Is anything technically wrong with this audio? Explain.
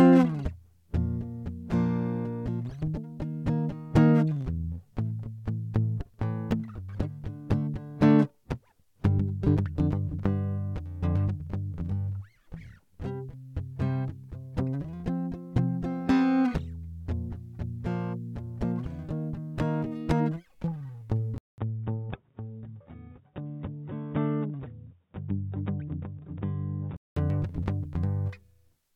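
Yes. From 21.38 to 27.17 s the music suddenly turns dull and boxy, losing everything above about 3.8 kHz, after a 200 ms gap, and drops roughly 5 dB with a faint new hiss well below it, likely an input switched to a poorer device mid-recording.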